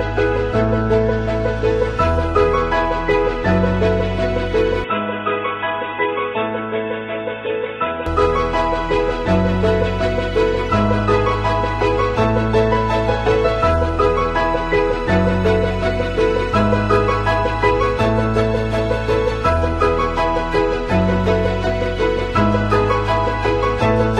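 From 4.84 to 8.06 s the sound turns dull, with nothing above 3.8 kHz. It drops by about 5 dB and gains new background noise roughly 45 dB down. The input likely switched to a poorer device. No gap marks either change.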